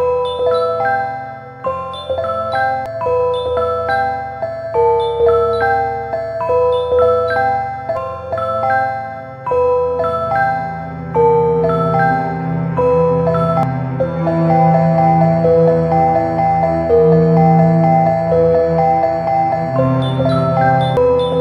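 At 2.86, 7.97, 13.63 and 20.97 s, brief glitches break into the sound. Each is damaged data in a compressed stream. Corrupted bytes make the decoder misread frames there. It loses sync, hunts for the next frame header, and a chirp, squawk, click or short hole results.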